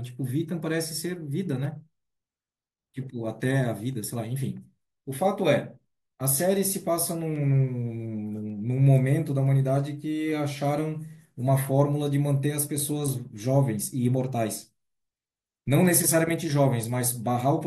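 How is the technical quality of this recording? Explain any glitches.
The recording is marred by a recurring glitch: clock drift buffer slips run through almost the whole clip. From 0.51 s to 17.64 s there is a click roughly every 1.14 s, around fifteen in all. The likely cause is two devices running on separate clocks that disagree by roughly 150 ppm. The buffer between them slowly drifts until a few samples are dropped or repeated. Each slip breaks the speech waveform, which is heard as a click.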